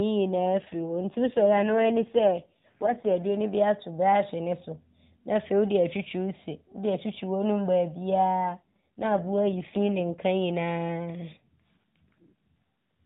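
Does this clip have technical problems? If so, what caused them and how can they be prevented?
Yes, there are two AMR rate drops, at 0.31–3.43 s (ending just before "bi ato brɔɔhye ne") and 8.47–10.23 s. The speech turns rougher and buzzier, which fits the codec stepping down from 12.2 to 5.9 kbps on a weak link. Keeping the phone on a stronger signal, or using a wideband or VoIP path, avoids it.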